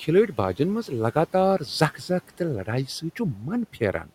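At 3.34 to 3.44 s and again from 3.73 to 4.11 s, speech is cut by the noise suppressor. It mistakes quiet speech for the room noise sitting about 26 dB below, pulling it down by about 7 dB and then about 12 dB. The affected speech sounds swallowed. On a spectrogram, energy thins abruptly, and the waveform envelope dips.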